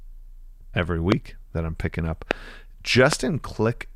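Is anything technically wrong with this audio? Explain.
Yes, there are three loud pops, at 1.12 to 1.14 s, 2.31 to 2.33 s and 3.13 to 3.15 s. A voltage pulse, likely from a plug, switch or static discharge, entered the signal chain. Each lands as a single sharp pop around 25 dB above the speech, with the speech continuing underneath. The first comes just before "that I'm picking up" and the second just after it.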